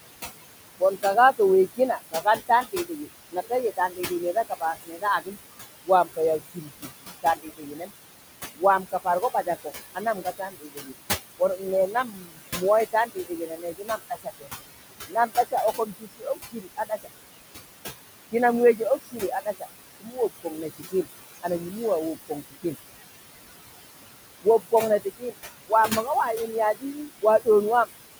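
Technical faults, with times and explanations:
Throughout: noise suppressor artifacts. The room noise sits only about 11 dB under the speech, and the suppressor pulls it down by about 18 dB. It works frame by frame, band by band, so the background drops away in the gaps and swells back up under the talking.
0.8–7.9 s, 8.56–14.48 s, 15.07–17.08 s, 18.32–22.65 s and 24.42–27.9 s: speech cut by the noise suppressor. In each of these stretches, bits of the speech get mistaken for noise and pushed down with the background, by about 19 to 21 dB at the deepest points. The first two stretches lose roughly two seconds each, the fourth about a second, and the third and fifth a bit under a second. Soft consonants and word tails come out swallowed or oddly faint.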